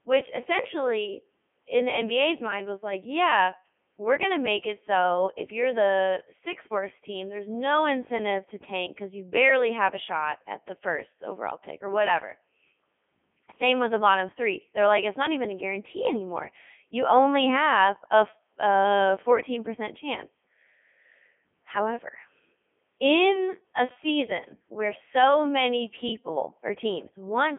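Throughout the speech, the Codec 2 vocoder rebuilds the voice from sine waves, which fits its 3.2 kbit/s mode, leaving it heavily robotic and buzzy. A spectrogram shows rigid harmonic stripes confined between 250 Hz and 3.4 kHz. The waveform no longer follows the original shape.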